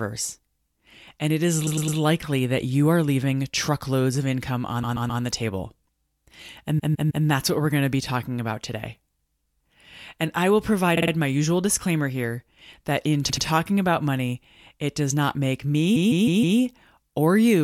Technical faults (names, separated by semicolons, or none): repeated frames